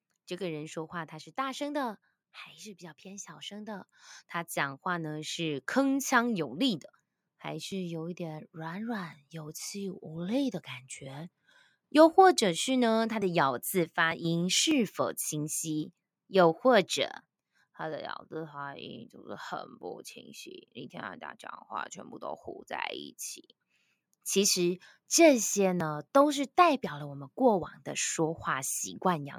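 Automatic gain rising runs from 0.37 to 11.34 s: the gain control judged the incoming speech too quiet and kept turning its gain up, by about 15 dB in all. The voice and the background noise swell together over those eleven seconds.

Automatic gain falling follows from 11.93 to 17.35 s, when the control judged its input too loud, or the background too strong for its setting, and eased the gain back by about 4 dB. The speech and its background sink in level together.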